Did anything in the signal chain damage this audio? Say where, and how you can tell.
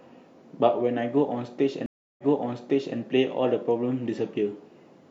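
Yes, a stream reconnect at the network stage. Audio stops for 322 ms from 1.86 s, then resumes about 0.79 s earlier, repeating material, with a faded first frame. A spectrogram shows a blank gap, then a repeated pattern as the restarted decoder replays a resent burst.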